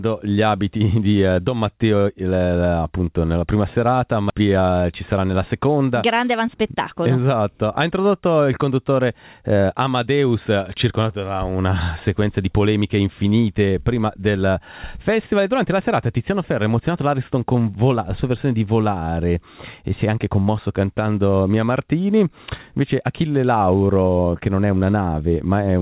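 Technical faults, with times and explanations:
4.30 s, skip ahead: playback jumps forward with no fill, dropping about a second of audio and joining both sides almost directly, as if queued audio was discarded.
4.40 to 5.54 s and 6.25 to 8.20 s, jitter buffer speed-up: the receiver repeatedly cut short pitch-period pieces, about a tenth of a second per stretch, so the audio runs 7% and then 5% fast at unchanged pitch and sounds hurried. The call path's G.711 mu-law codec leaves nothing above 4 kHz.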